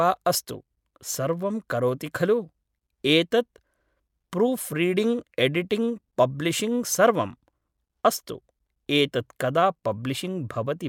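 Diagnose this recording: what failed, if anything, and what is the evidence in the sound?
Nothing failed: across the speech, no stage of the chain leaves any audible fault.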